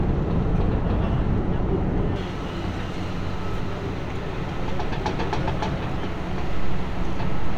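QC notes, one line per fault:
0.00–2.16 s, de-emphasis applied wrongly: a treble cut meant to undo pre-emphasis hits audio without it or is applied twice, so the response slopes smoothly down, about 11 dB lower at 10 kHz than at 1 kHz, giving a dull, muffled sound. On a spectrogram the upper bands fade progressively toward the top.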